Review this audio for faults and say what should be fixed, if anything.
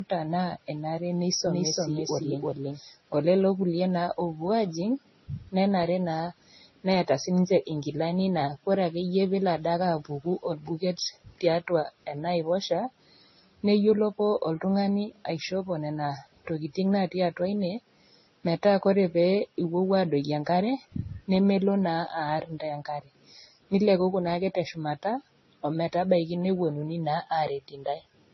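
The speech sounds dull and smeared throughout, with nothing above 6 kHz and several kinds of swirly, watery artefacts heard together. The likely cause is transcoding between lossy codecs: each low-bitrate stage re-encodes the previous one's damage, and the sound fits a chain ending in Vorbis. To prevent it, keep a lossless master and encode to the delivery format only once.

From 1.47 s to 2.79 s the speech is heard twice. A second full-band copy at about the same level trails roughly 300 ms behind, with no reverb, and starts and stops abruptly. This is a doubled audio track, likely from a second, slower capture path or an edit holding two copies out of step. To prevent it, feed each source through a single capture path and check edits for duplicated, overlapping regions.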